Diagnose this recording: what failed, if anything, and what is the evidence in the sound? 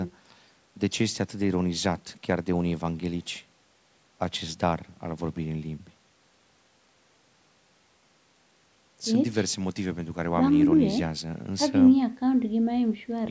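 Nothing failed; this speech recording shows no faults.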